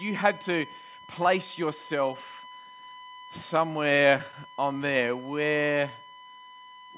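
A steady USB whine at 1 kHz runs through the whole clip, about 20 dB below the speech. The bus's 1 ms frame timing leaks in through power or ground.

Between 3.72 and 4.58 s, scattered short gaps occur: roughly seven lost or late packets, the longest about 15 ms. Each was patched by continuing the last sound, so they are heard as brief ticks and smears.

From 5.48 to 5.91 s, a jitter buffer slow-down repeats pitch periods to rebuild reserve. This adds 50 ms and drops the speed to 91% at unchanged pitch, drawing the speech out. The call path's band limit, with nothing above 4 kHz, fits G.711 mu-law coding.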